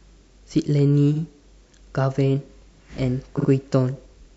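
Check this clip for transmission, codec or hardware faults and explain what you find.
Repeated frames appear twice in the speech. At 1.14 s one 46 ms block plays an extra time, and at 3.37 s another plays twice more, adding 93 ms. Each points to a single compressed frame resent and decoded again. The result is a brief stutter. A spectrogram shows identical side-by-side slices, and the waveform shows a copied segment.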